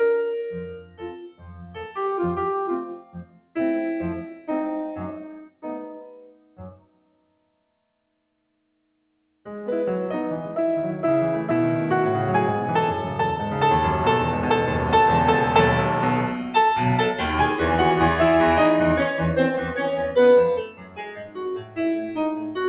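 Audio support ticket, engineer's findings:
Music pumping and thinning throughout, level swinging by around 15 dB. Attacks come through while held notes and decays sink. Probable component: the noise suppressor, tuned for speech and left active on music. Steady tones and reverb tails are treated as background noise and gain-reduced, so the texture flutters. It is heard over a narrowband call path with nothing above 4 kHz, which points to G.711 mu-law at 64 kbps.

Sound cut by the noise suppressor. Sustained material sinks or fades early at these points:
0.67–1.97 s, about 19 dB down.
2.86–3.56 s, about 20 dB.
4.32–4.49 s, about 9 dB.
5.26–9.46 s, about 20 dB, the longest stretch.
19.52–20.17 s, about 10 dB.
20.56 s to the end, about 20 dB.
The mechanism is the same suppressor classing held sound as noise and cutting its decay short.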